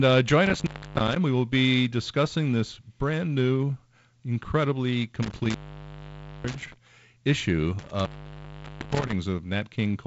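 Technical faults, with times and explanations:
0.46–1.16 s, 5.23–6.76 s and 7.79–9.12 s, intermittent contact: a loose connection opens after "uh join", then after "this brand new incredibly", then again, cutting the sound for about 0.29 s, 0.90 s and 0.86 s. Crackle at each break and faint hiss while the line is open set it apart from a clean digital dropout, which goes fully silent.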